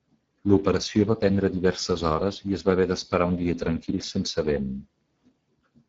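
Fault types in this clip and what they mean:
Speex codec: This older speech codec models the voice and spends few bits on the excitation signal. Here the damage is plainly audible throughout, giving the speech a noisy, hoarse texture. That fits a low bitrate of about 10 kbps.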